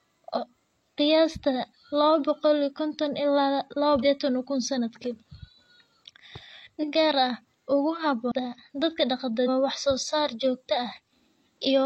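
Damaged data in a compressed stream hits this speech clip five times: 0.33–0.39, 4.00–4.05, 6.78–6.85, 8.27–8.32 and 9.43–9.49 s. Corrupted bytes make the decoder misread frames and lose sync, producing brief chirps or squawks of about 50–60 ms.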